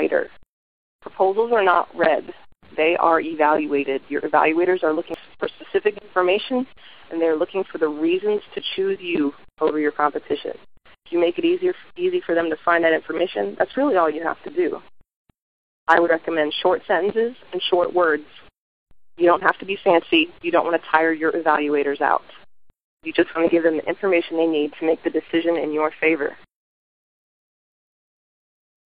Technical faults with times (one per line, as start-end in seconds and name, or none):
5.14 damaged data in a compressed stream
16.06-16.11 damaged data in a compressed stream